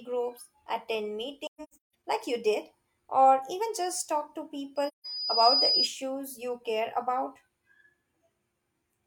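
A speech recording with two kinds of fault. AAC frame loss with muting appears from 1.46 to 1.94 s, where about 430 ms of audio drops out in several gaps spread over roughly 600 ms, the longest near 150 ms. The amount missing fits about ten lost frames. A second, shorter hole of about 170 ms, consistent with four frames, falls at 4.88 to 5.06 s. The decoder zeroes each missing frame, so the overlapping windows fade the sound out and back in. The waveform shows soft-tapered flat gaps, and the spectrogram shows full-height blank columns. A loudspeaker feedback squeal runs from 4.76 to 5.89 s: a 5 kHz tone swells over less than a second until it sits a few dB above the speech. It is caused by the microphone picking up its own loudspeaker with loop gain above one at that frequency. On a spectrogram it is a single bright horizontal line that thickens as it grows.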